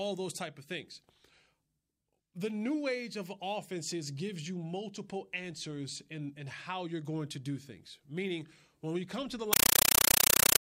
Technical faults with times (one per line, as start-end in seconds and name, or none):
9.53-10.61 compressed stream played as audio